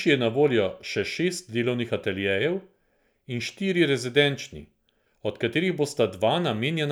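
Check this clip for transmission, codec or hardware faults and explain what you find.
Nothing in the transmission, codec or hardware path of this speech recording can be heard going wrong at any point.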